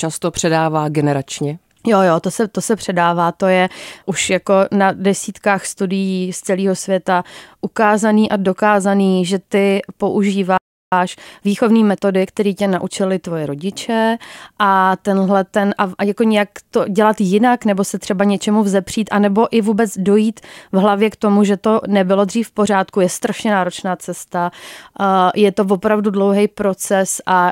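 At 10.58 s the speech cuts to silence for about 0.34 s, a playback stall, likely the player starving for data. From 10.92 to 12.28 s comes time-compressed catch-up: the speech runs about 1.25 times faster at unchanged pitch, starting on "tě naučili tvoje rodiče".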